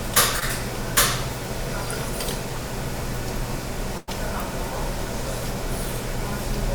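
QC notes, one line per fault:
0.39–0.43 s: short concealed packet loss. About 20 ms of audio failed to arrive in time, and the receiver bridged the hole by extending the preceding sound before blending back. The result is a brief smear or wobble rather than an audible dropout. Unlike a burst, nothing fades.
3.97–4.09 s: burst of packet loss. Roughly 100 ms in a row went missing. Concealment carried the last sound forward and turned it down, producing a held buzz or fading hiss, then the audio jumps ahead with that stretch gone. That fade and skip set it apart from a short concealed loss.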